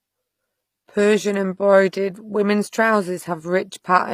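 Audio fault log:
throughout, HE-AAC compression: the speech's treble is likely rebuilt from copied lower bands, so sibilants sound gritty and lispy rather than simply dulled as with plain low-pass loss, which fits a bitrate near 24 kbps.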